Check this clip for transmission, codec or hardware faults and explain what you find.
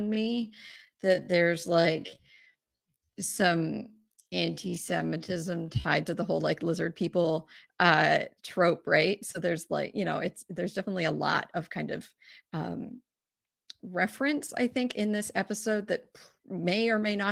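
One fault stands out: a time-stretched section from 0.0 to 5.9 s, ending just before "to the whole like". The opening stretch of speech was likely slowed by software to fill a longer slot, running at about 0.59 times normal pace while pitch was held by repeating short fragments. That repetition makes the voice drag, and the pace jumps abruptly when normal speed resumes. The light Opus voice coding across the clip is a separate matter.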